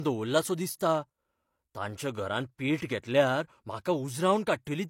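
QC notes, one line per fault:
Throughout: low-bitrate audio saved at a high bitrate. The speech has nothing above 16.3 kHz and carries the smeared, swirly coding artefacts of a heavily squeezed encode, yet the file is a high-bitrate MP3. The likely cause is an earlier low-bitrate pass, consistent with something like HE-AAC at around 32 kbit/s, later re-saved as MP3. Unlike a plain low-bitrate file, the high bitrate here restores nothing; the damage predates it.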